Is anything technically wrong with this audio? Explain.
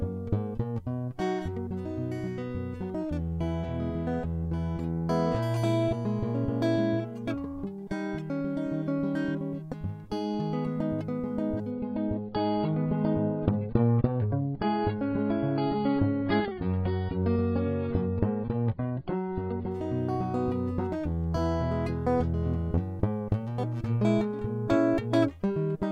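Yes. From 11.71 s to 19.71 s the music drops to a much lower quality, a sign of an adaptive stream switching to a lower bitrate. When the connection slowed, the player swapped to a smaller encoding of the same audio without a gap. For those 8 seconds nothing is heard above 5.3 kHz, and codec artefacts grow. The change fits a move from about 96 kbit/s AAC down to about 16 kbit/s. Full treble returns just as abruptly at 19.71 s.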